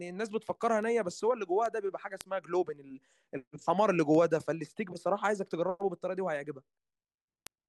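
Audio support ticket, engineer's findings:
Word clock ticks through the speech, 0.27 to 7.47 s. Around thirty sharp ticks of uneven strength, roughly every 0.3 s. Receiver likely free-running, not locked to the source clock, with an offset of roughly 70 ppm. Each tick fits a single sample slipped.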